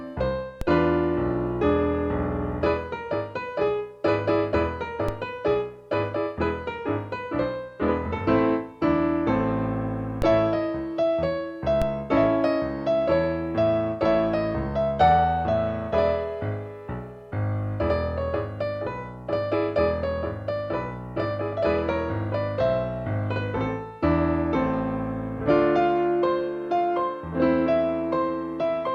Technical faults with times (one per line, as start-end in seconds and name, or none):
0.61 DC step
5.08 DC step
10.22 DC step
11.82 DC step